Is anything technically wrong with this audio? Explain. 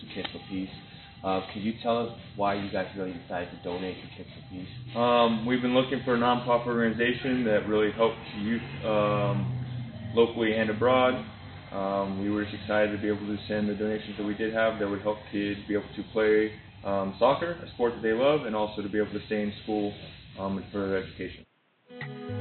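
No, nothing is technically wrong with this audio.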